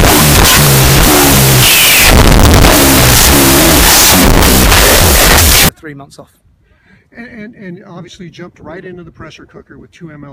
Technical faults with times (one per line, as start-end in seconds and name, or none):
0.00-5.69 wrong sample width